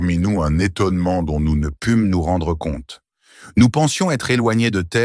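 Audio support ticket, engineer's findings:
Wrong sample rate, 0.00 to 1.63 s. Playback clock running slower than capture, no resampling; ratio fits 24 kHz audio played at 22 kHz. Sound drops about 1.5 semitones and runs at 0.919 speed, low and dragging, until 1.63 s.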